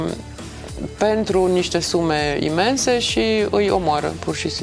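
Nothing stood out on listening; no technical fault could be heard anywhere in the clip.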